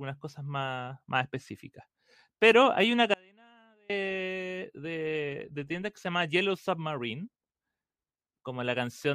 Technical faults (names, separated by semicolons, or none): audio dropout to a faint residue